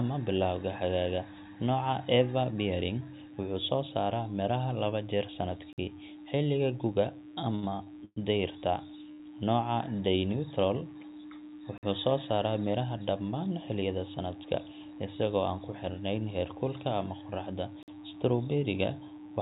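Running under the whole clip is a mains buzz. Something like a dimmer, a rectifier or an unshielded cable has let sharp switching spikes from a 60 Hz supply into the signal, twice per cycle. The resulting harmonics climb well into the kilohertz range, so it is a raspy, steady buzz rather than a soft hum, sitting about 35 dB below the speech and present even in the pauses.

At 5.73 s comes the first gap between chunks. The audio was delivered in 6-second blocks, and something at each join, most plausibly late starts or codec padding, left 50 ms of dead silence before the next block began. Nothing is lost, but the speech is cut by a hole. The same 50 ms gap returns at 11.78 s and 17.83 s, about 6 seconds apart each time.

From 7.55 s to 8.18 s there are repeated stalls (stutter). Packets kept reaching the receiver late, so its jitter buffer emptied four separate times in little more than half a second. 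Each time, the receiver stretched the last sound to cover the wait, about 233 ms in total, with the longest single hold at 116 ms. Over roughly a third of that stretch the listener hears held sound instead of fresh speech, so the delivery drags and catches.

Between 9.12 s and 9.21 s there is a short stall from a late packet. One packet missed its slot, and the buffer ran dry. The receiver held the preceding sound for about 80 ms and then carried on from the same point, so nothing drops out. The result is a single sound drawn out too long, with a faint buzzy, slightly sagging quality. Across the clip, the telephone-band call path leaves nothing above 4 kHz, which fits a G.711 codec.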